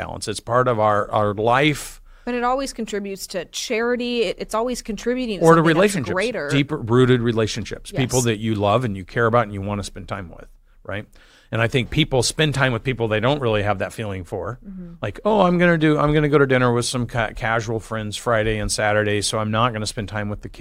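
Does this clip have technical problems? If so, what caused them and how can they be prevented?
No, no technical faults here.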